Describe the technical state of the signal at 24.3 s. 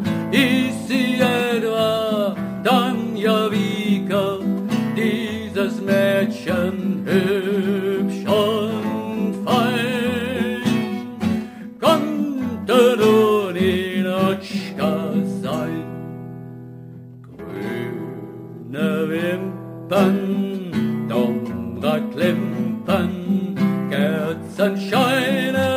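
At 24.3 s, as throughout the clip, crude rate conversion is present: samples are simply repeated rather than filtered, which fits a conversion from 32 kHz to 44.1 kHz. The result is a gritty, inharmonic fizz roughly 25 dB below the signal. A spectrogram shows faint mirrored tones that are shifted, inharmonic copies of the content, and the waveform shows stair-step duplicated samples in a regular repeating pattern.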